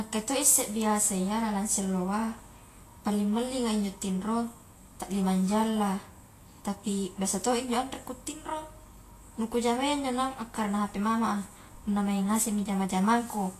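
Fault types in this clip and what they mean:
Vorbis compression: likely low-bitrate Vorbis coding quantised the treble coarsely, so the speech sounds plainly hissy and grainy, with nothing above 14.2 kHz.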